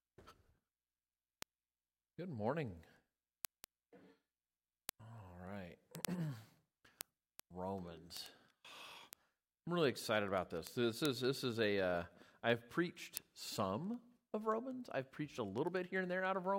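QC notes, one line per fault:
0.17–16.54 s, word clock ticks: sharp ticks recur at a steady rate of about ten per second, around 150 in all. The receiving device runs on its own clock, roughly 200 ppm off the sender's, and drops or repeats one sample at each slip.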